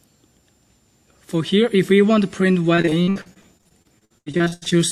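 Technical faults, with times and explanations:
2.75–4.76 s, repeated packet loss (robotic sound): the audio turns choppy. Over twenty dropouts follow in quick succession, the longest 80 ms. Each hole is patched by stretching the last sound, so about a third of this stretch is filler.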